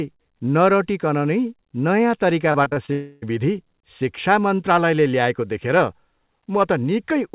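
From 2.52 to 2.9 s the speech breaks into repeated packet loss with a robotic sound: a handful of short holes, none longer than about 25 ms, each patched by repeating the preceding audio, so roughly a quarter of that span is synthetic fill. It sounds choppy, with pieces missing. On a spectrogram the harmonic bands turn blocky and smeared in short steps. The waveform shows repeated, copy-like segments where the natural shape breaks. Everything sits below 4 kHz, which fits a G.711 mu-law call path.

Straight after, from 2.92 to 3.24 s, comes about 0.3 s of continued, fading buzz or hiss that carries no new speech, most likely a long network dropout. The receiver stretches the last audio across the whole gap without falling to silence, and normal speech resumes at 3.24 s with that portion lost. On a spectrogram the stretch looks like frozen, repeating harmonics with no formant movement. The waveform shows a periodic, looped pattern instead of changing speech.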